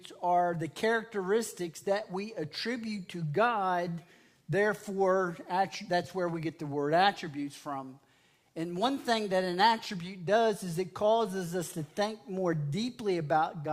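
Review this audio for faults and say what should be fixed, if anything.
Nothing here needs fixing, since no faults turn up anywhere in the recording.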